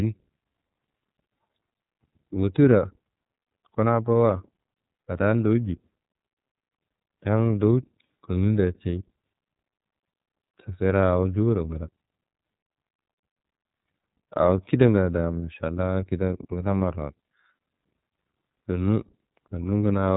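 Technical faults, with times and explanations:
Throughout, iLBC codec: the audio is band-limited with nothing above 3.8 kHz, which gives the speech a narrow telephone quality. The codec damage is plainly audible as a rough, slightly synthetic texture. Each 30 ms frame's excitation is coded independently of the previous frame, so small discontinuities between frames add that grainy edge. The sound fits iLBC's 13.33 kbps mode.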